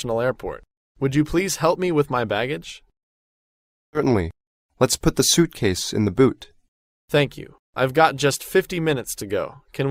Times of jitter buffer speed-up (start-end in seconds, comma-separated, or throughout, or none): 4.07-7.17